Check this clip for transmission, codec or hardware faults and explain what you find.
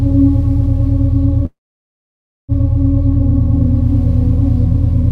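One fault: a call audio freeze from 1.45 to 2.52 s, likely caused by delayed packets draining the jitter buffer. A short fading buzz or hiss gives way to 0.95 s of silence. The sound then resumes intact, 1.03 s late. The waveform shows a flat gap, and the spectrogram shows a smeared tail and then a blank column.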